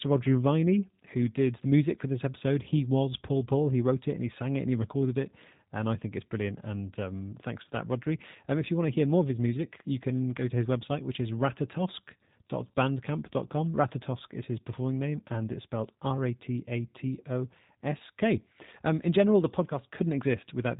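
From start to finish the speech carries G.729 codec damage, plainly audible. Each 10 ms frame is rebuilt from a vocal tract model, pitch prediction and sparse pulses, which fits an 8 kbit/s G.729A link. Nothing above 4 kHz remains, and voices sound rough and synthetic.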